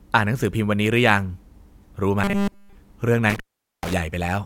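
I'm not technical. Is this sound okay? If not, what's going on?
No. From 2.24 to 2.75 s the system likely stopped receiving new audio in time and kept replaying one tiny 5 ms slice. This is robotic sound from repeated short buffers: the speech becomes a stiff, metallic 200 Hz buzz that only loosely tracks the talking.

From 3.30 to 3.93 s a loose cable or plug briefly lost its connection, an intermittent contact. The sound crackles, then drops out for about 0.43 s, leaving only faint hiss, before the connection returns with another crackle.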